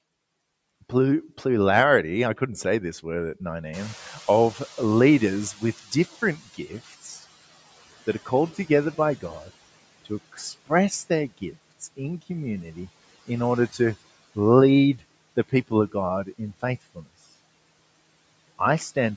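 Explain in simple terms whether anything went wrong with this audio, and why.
Two things went wrong. The noise suppressor was catching up: background noise jumped at about three and a half seconds, and from 3.73 to 7.07 s it leaked through before fading.

Speech was cut by the noise suppressor: from 10.32 to 10.70 s, just before "their gifts in community", it mistook part of the speech for noise and briefly swallowed it.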